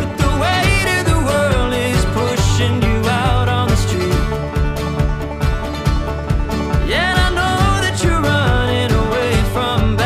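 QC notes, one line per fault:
Nothing stood out on listening.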